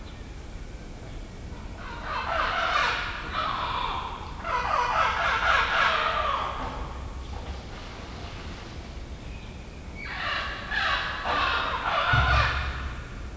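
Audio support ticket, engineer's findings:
Wrong sample rate, whole clip. Playback clock at half the recording rate, no resampling; fits 32 kHz material played out at 16 kHz. Result: everything at 0.5x speed, pitch down 12 semitones, a full octave. Sound drawn out, heavy, sluggish. Likely culprit: rate mismatch between file header and output device.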